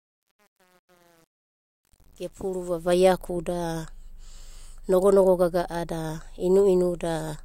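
From the start to 2.99 s, the speech fades in with truncation distortion on a fade. The gain stage keeps too few bits without dither, which fits roughly 8-bit resolution, so through 2.75 s the quiet signal breaks into gritty steps before the fade smooths out.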